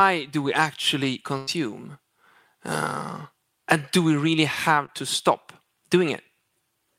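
At 1.37 s, right after "do we actually", the audio stops moving forward: the last sound is drawn out into a steady, artificial tail that fades for roughly a tenth of a second, and then the speech jumps ahead to 1.49 s with about 100 ms of the original gone. This is a burst of packet loss. A run of consecutive audio data arrived too late or not at all. The receiver kept extending and softening what it last had, then resumed at the current point, skipping what was lost.

Just after "and do we really", at 4.85 s, there is a much briefer disturbance, a quick smear lasting about 30 ms, ending at 4.90 s, before the speech carries on. This is short concealed packet loss. A small piece of the signal, about 20 ms, never reached the decoder in time. The receiver synthesised a stand-in by continuing the preceding sound for around 30 ms, then blended back into the real audio, so the gap is masked rather than heard as silence.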